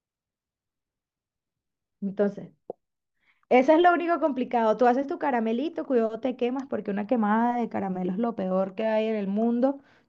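No technical faults can be heard anywhere in the recording.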